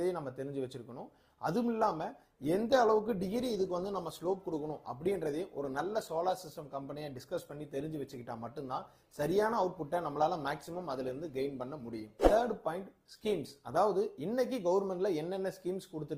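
Adaptive stream at a lower bitrate, from 1.81 s to 13.81 s: the stream switches abruptly to a leaner encoding without any gap, which sounds like a drop from roughly 64 to 16 kbit/s Opus. Artefacts thicken for those 12 s before full quality snaps back.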